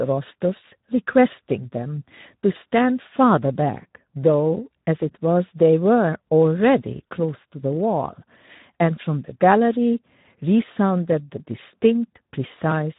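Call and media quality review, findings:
Speex codec artefacts throughout: hoarse, noisy speech texture, nothing above 3.8 kHz; starved CELP excitation, consistent with a low bitrate near 11 kbps.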